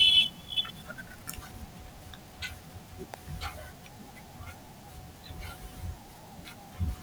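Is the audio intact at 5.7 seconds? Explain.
Yes, the speech at 5.7 seconds is intact, with no audible fault at that moment.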